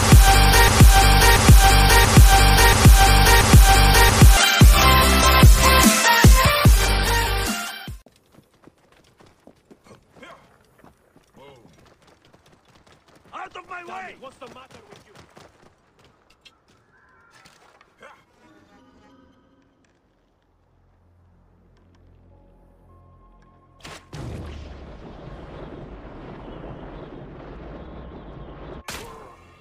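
From 0 to 4.37 s, a broken-record loop repeats one 0.68 s fragment exactly, back to back, likely from a stalled player; unlike a stutter, the repeats never vary.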